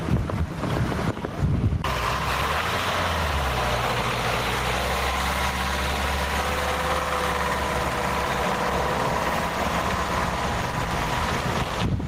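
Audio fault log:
throughout, gain pumping: The input gain is likely set far too high, so a fast limiter or compressor clamps down on each loud sound and then lets go. The gain swings by around 15 dB, and the whole sound comes out squashed.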